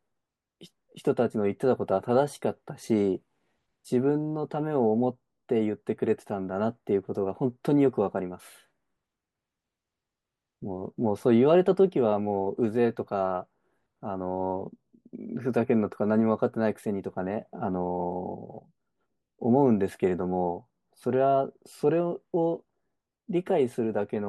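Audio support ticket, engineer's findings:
No audible faults found on this speech recording.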